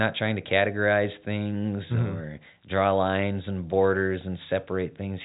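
Speech over a G.711 A-law telephone path, band-limited below 4 kHz as that format requires, with nothing wrong to report.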